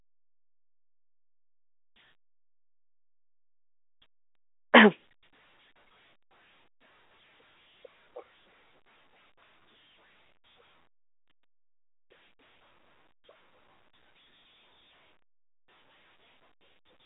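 No technical faults are present.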